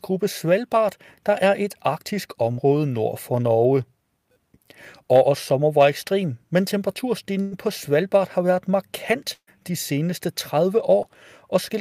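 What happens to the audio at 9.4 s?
A burst of packet loss runs from 9.33 to 9.49 s. About 140 ms of speech is lost. The last sound is stretched and fades before the speech resumes further on.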